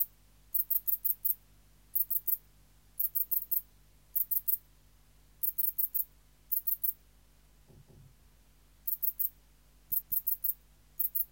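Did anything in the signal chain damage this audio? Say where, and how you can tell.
Yes. Overlapping chunks at the buffer or chunked-processing stage cause a stutter between 3.42 and 3.62 s, where a 200 ms stretch plays twice. The next 2.0 s chunk began before the previous one finished, so the overlapping audio was output again at the join.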